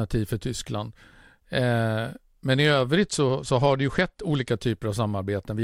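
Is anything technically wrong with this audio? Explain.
Yes. From 2.98 to 4.51 s, after "men i", a Bluetooth SBC bit pool drop dulls the treble and adds gritty noise. Starved upper sub-bands suggest the bit pool falling from 31 to 12, near 88 kbps.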